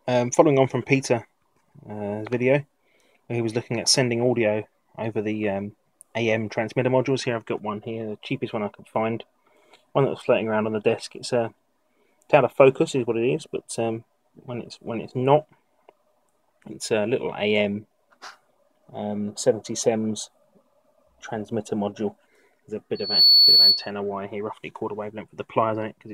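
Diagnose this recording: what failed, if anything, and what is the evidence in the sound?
Loudspeaker feedback squeal, 22.95 to 23.91 s, in the analogue acoustic path: a 4.4 kHz tone swells within roughly a third of a second to about 10 dB above the sound, because loop gain from microphone to loudspeaker exceeded one there.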